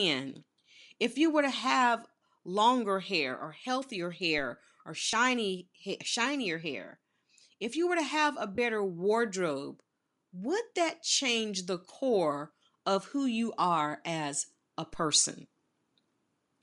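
Across the whole clip the speech has a breathy, grainy top end, most likely from Bluetooth LC3 compression. The codec damage is plainly audible and points to a setting near 48 kbps with 10 ms frames. On a spectrogram the upper bands look patchy and noise-filled rather than cleanly harmonic.

At 2.27 s, between "you were to have" and "longer hair or healthier", lost LE Audio frames leave a brief 10 ms smear, consistent with one missing frame. The decoder repeated the previous spectrum with scrambled phase, so harmonics blur into a short noisy band on a spectrogram.

At 4.38 s, right after "longer hair or healthier", a DC step makes a low thump. The waveform's zero line jumps abruptly, then creeps back over a few tens of milliseconds as a 5 Hz high-pass drains the offset. The speech carries on underneath.

From 5.11 to 5.13 s another frame loss concealment covers 20 ms, which fits two missing frames. 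It is heard as a grainy blur in the sound, and on a spectrogram it shows as a short stretch where harmonic striations dissolve into noise.

From 8.55 to 8.58 s, between "were to have a" and "wardrobe would that change", 30 ms of lost LE Audio frames suggest three in a row. The smear shows as a wider smudge across the harmonics.

At 14.94 s a second DC step produces the same low click. The waveform shows a sudden baseline offset that decays smoothly back toward zero through the 5 Hz high-pass.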